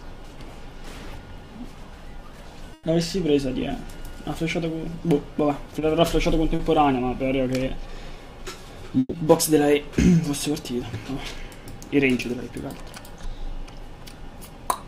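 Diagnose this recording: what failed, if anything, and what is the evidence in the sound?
What failed is the network path, in two forms. The first is a burst of packet loss, heard at 2.73 to 2.85 s and again at 8.99 to 9.15 s. Each time the sound stretches into a held, fading continuation, then picks up further along. About 100 ms is missing at the first point and 140 ms at the second, where the tail drops to silence for about 20 ms. The receiver's concealment extended the last audio across the gap and faded it out.

Two smaller events are short concealed packet loss, at 5.79 to 5.83 s and 6.55 to 6.61 s. Each is a brief smear or wobble rather than a gap, with about 20 ms and 40 ms of real audio lost. The decoder again filled the hole by continuing the preceding sound, then blended back into the arriving audio. These losses were short enough that the patch stays brief, but the original content under them is gone.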